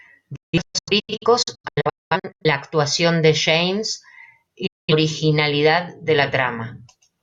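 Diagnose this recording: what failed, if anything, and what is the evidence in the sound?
Speech mutes in quick 8 ms fades, in scattered holes from 0.36 to 2.46 s before "actuación de" and again at 4.66–4.93 s: a digital broadcast dropout, the receiver muting corrupted frames.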